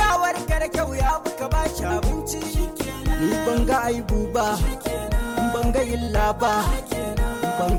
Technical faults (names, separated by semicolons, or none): short concealed packet loss